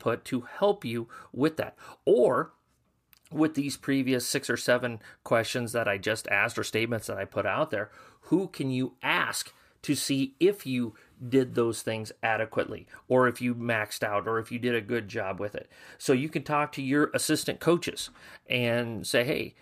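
No technical faults can be heard anywhere in the speech. There is nothing in the recording that needs a timestamp or an explanation.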